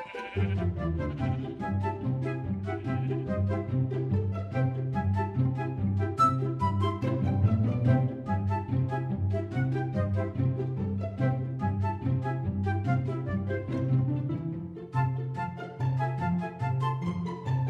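No audible technical faults anywhere in this audio.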